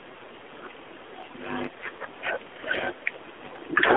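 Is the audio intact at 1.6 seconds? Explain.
No. At 1.6 seconds, as everywhere else in the clip, the speech has passed through the AMR narrowband mobile codec. The 8 kHz vocal-tract model rebuilds each 5 ms from a few pulses, and its plainly buzzy, synthetic edge fits a low rate near 7.4 kbps. On a spectrogram, energy sits only between 250 Hz and 3.5 kHz, with a hard empty ceiling above and a thin floor below, and the harmonics look smeared in frame-sized blocks.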